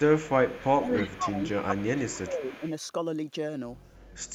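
Echo leak in this speech runs from 0.0 to 1.17 s, 1.46 to 2.23 s and 2.43 to 2.71 s: a faint copy trailing by 280 ms, likely loudspeaker pickup the far end's echo canceller missed. Speech suppressed in double talk hits at 0.79 to 0.9 s and 1.17 to 2.62 s, dipping up to about 15 dB, likely the canceller ducking both talkers at once.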